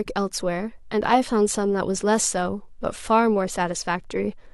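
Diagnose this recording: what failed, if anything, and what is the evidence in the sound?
Nothing failed in this recording, and the sound holds no evidence of a fault at any stage.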